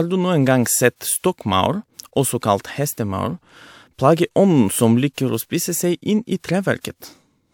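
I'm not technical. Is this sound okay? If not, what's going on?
Yes, this sound is okay, and nothing is going on with it.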